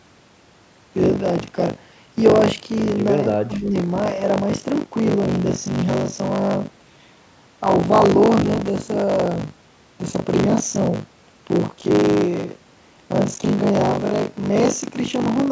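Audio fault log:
Throughout: buffer tearing. A rattling 50 Hz buzz rides on the speech because roughly a third of each buffer replays audio from around 40 ms earlier, with hard joins either side. Unlike mains hum, it vanishes in silences and follows the signal.
3.44–3.74 s: speech suppressed in double talk. The voice dips by about 15 dB for this short stretch, likely because an echo canceller ducked it while the far side was also talking.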